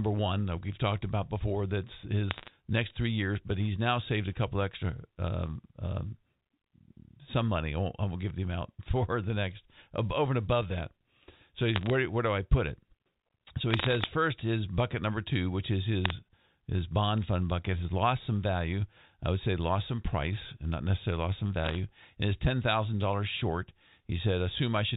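Short bursts of crackle from bit errors on a digital phone line land at 2.31–2.48 s, just before "next three years but", then 11.76–11.90 s, 13.71–14.06 s, 16.04–16.11 s between "number two which is" and "his bond fund bucket", and 21.64–21.76 s after "not necessarily lost some". On this G.711 mu-law speech, each flipped bit corrupts a single sample, and hits on sign or high bits give sharp ticks. The error rate is a fraction of a percent, so the speech stays intact under the clicks.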